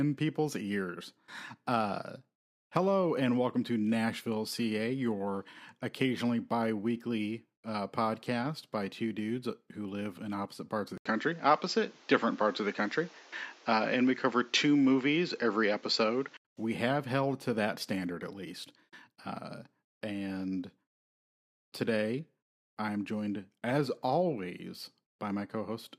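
An input switch to a poorer device runs from 10.98 s to 16.45 s, just after "in opposite parts of". An 80 ms silence opens the switch. The speech then loses everything above 7.6 kHz and turns dull and boxy, its level shifts by a few dB, and a new background noise sits roughly 35 dB under it. This likely reflects the recording changing to another microphone or a headset's call profile. At 16.45 s the full, clear sound returns.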